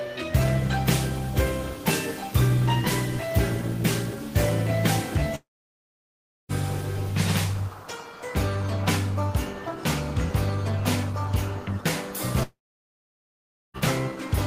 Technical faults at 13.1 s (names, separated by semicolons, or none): long network dropout